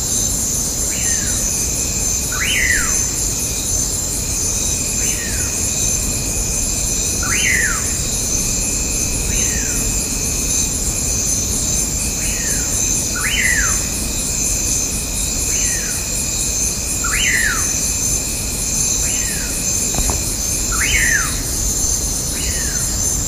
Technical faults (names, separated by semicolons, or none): DC step